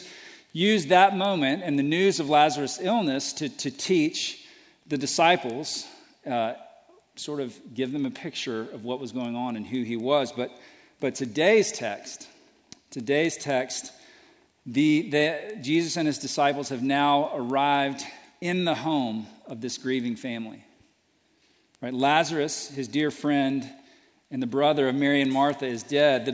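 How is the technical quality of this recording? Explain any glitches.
The recording has one steady glitch: a regular ticking throughout, from a resampler restarted on every block. Each 250 ms block was converted separately, so its edges lacked true neighbouring samples, which fits a 48 kHz to 16 kHz conversion. The result is a small tick four times per second. Unlike dropouts or clipping, nothing is lost or flattened, the spacing never varies, and the ticks vanish whenever the signal stops.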